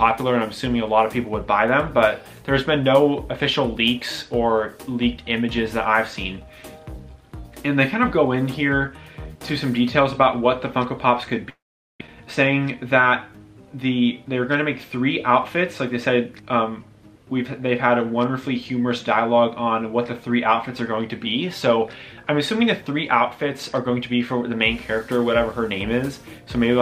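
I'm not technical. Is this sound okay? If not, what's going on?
No. From 11.49 to 12.02 s the sound cuts out for about half a second. A brief fading buzz continues the last sound, then there is near silence before the audio resumes with that part missing. This is likely a long network dropout.

Right after, from 12.07 to 12.09 s, there is a short concealed packet loss. About a hundredth of a second never arrived, and the receiver filled the gap by continuing the previous sound. It comes across as a tiny smear or wobble.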